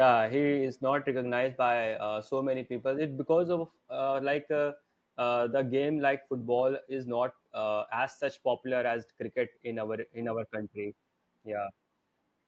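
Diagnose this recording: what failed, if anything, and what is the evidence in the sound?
Nothing failed in this recording, and the sound gives no evidence of a fault at any stage.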